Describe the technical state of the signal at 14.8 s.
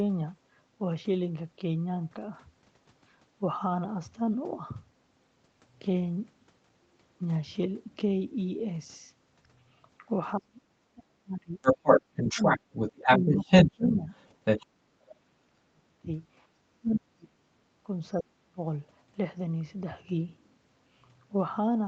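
Speech suppressed in double talk, 14.64 to 16.08 s: speech drops up to about 40 dB, likely an echo canceller attenuating both sides during overlap.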